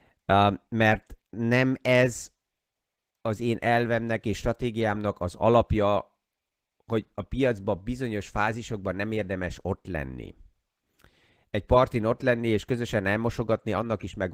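Throughout the speech, Opus voice compression in hybrid mode codes the lower band by linear prediction with a coarse excitation and the upper band thinly, which fits a low bitrate near 16 kbps. The result is plainly audible: hoarse, slightly robotic speech.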